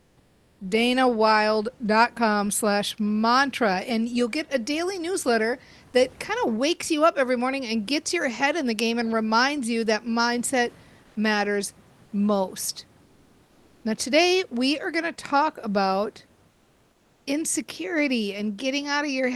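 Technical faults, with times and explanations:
0.00–0.59 s and 11.03–11.15 s (between "reminds you that mindset" and "matters most"), comfort noise in place of the background: the room noise gives way to a smooth, featureless hiss. The first gap is about 4 dB quieter and the second about 1 dB louder. On a spectrogram the grainy background texture goes flat and even. The likely cause is discontinuous transmission, as in Opus DTX.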